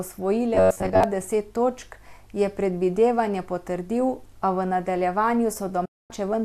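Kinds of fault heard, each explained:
Robotic sound from repeated short buffers: a rigid, metallic buzz near 94 Hz, likely because late audio was replaced by looping roughly 10.7 ms snippets.
Digital broadcast dropout: the sound fades out within 8 ms and stays silent for 240 ms, as the receiver mutes after losing its digital frames.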